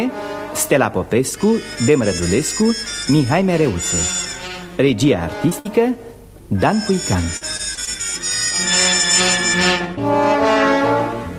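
Packets carrying this call's audio were lost or arrived too late, in three places. First comes a short concealed packet loss from 5.49 to 5.53 s. About 20 ms never reached the decoder, and the receiver patched the hole by extending the preceding sound for roughly 18 ms before blending back into the real signal. The result is a brief smear or wobble, where a short transient could simply drop out. Only a moment later, from 5.59 to 5.67 s, a burst of packet loss removes about 60 ms in a row. The receiver again carries the last sound forward, about 57 ms of it, lowering the level as the gap runs on. What you hear is a held buzz or fading hiss, and then the audio picks up further along with that slice absent. The third fault is repeated packet loss (robotic sound) between 7.37 and 7.89 s. Across that half-second the stream breaks four times, with the longest gap 41 ms and around 100 ms lost in total, so roughly a fifth of the stretch is synthesized fill. 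Because each patch is followed closely by the next, the sound turns choppy, with small pieces missing throughout the span.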